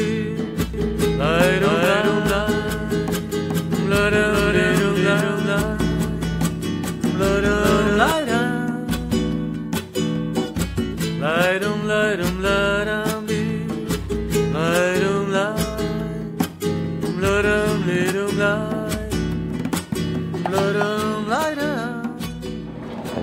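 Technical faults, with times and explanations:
0.74–8.12 s, doubled audio track: Every sound is followed by a second full-band copy of itself, arriving about 400 ms later at roughly the same loudness, so the passage sounds smeared and stuttering. The copy has no decay or room colour, and it cuts in and out abruptly at the range's edges. The cause is likely a second capture of the same signal through a slower path, or an edit that left two copies out of step.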